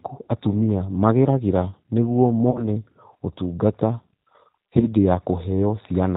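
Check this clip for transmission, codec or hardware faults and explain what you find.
Two kinds of fault are audible: coarse low-rate codec coding across the whole clip, and two short packet-loss dropouts that the decoder papers over.

The G.729 codec colours the speech throughout. The roughness and slightly synthetic texture fit G.729A at 8 kbit/s, which rebuilds each frame from a vocal tract filter, a pitch predictor and a few pulses rather than the waveform itself. The damage is plainly audible. On a spectrogram, nothing appears above 4 kHz, and harmonics look smeared and grainy instead of cleanly banded.

VoIP packet loss concealed by the speech codec occurs at 2.51–2.65 s and again at 4.80–4.87 s. The first gap is about 40 ms, consistent with two lost packets, and the second about 20 ms, consistent with one. The decoder stretched its last pitch and filter with falling gain, so each gap becomes a brief buzzy tone or coloured noise that fades, and the speech stays weak for a little while after packets resume. 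On a waveform, the envelope decays steadily through each gap. On a spectrogram, a frozen, fading pattern replaces the normal pitch movement there.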